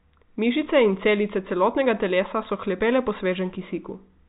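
No technical faults are audible anywhere in the speech.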